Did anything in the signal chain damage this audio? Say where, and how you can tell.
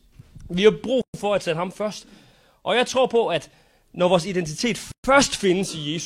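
Yes. There is a gap at a join of encoded pieces, from the codec stage: a gap of about 124 ms at 1.02–1.14 s after "har brug", and at 4.92–5.04 s after "at når vores identitet". The waveform and spectrogram show blank columns with smeared edges, left by untrimmed encoder delay and padding.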